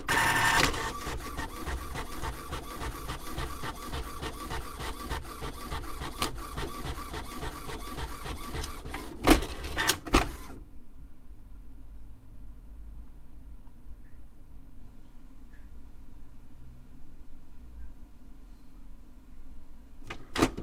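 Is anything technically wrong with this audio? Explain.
No, there's nothing technically wrong that I can hear here, so this one's fine to leave as it is.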